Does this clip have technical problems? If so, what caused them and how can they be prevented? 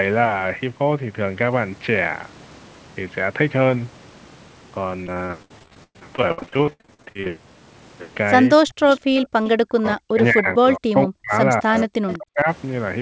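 Yes. From 5.04 to 7.27 s the speech turns choppy and robotic: repeated packet loss. About 40 short gaps hit this span, the longest about 110 ms. Each hole is filled by stretching the sound just before it, so roughly two fifths of the span is patched rather than real. The repeated patching gives the robotic quality. Pieces of the speech are simply missing. A steadier network path and a jitter buffer with more headroom would prevent this.

Speech suppressed in double talk is heard at 8.56 to 8.87 s, 9.68 to 11.33 s and 11.61 to 12.48 s. The voice drops sharply, by up to about 40 dB. This likely happens because the far side is talking at the same moment. The echo canceller then cannot tell the local talker from loudspeaker echo, and it turns everything down. A headset on the talker's side, or a better double-talk detector, would prevent this.

An echo leak appears at 8.91 to 9.28 s, at 9.44 to 9.50 s, and briefly at 12.10 s. 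A faint, delayed copy of the speech comes back, lagging by 203 ms. It sits about 20 dB below the voice. This is likely a loudspeaker on one end whose echo canceller missed part of the pickup. Using a headset, or tuning that canceller, would prevent this.

The bass trim and the cut above 8 kHz come from the call's microphone processing and the G.722 codec.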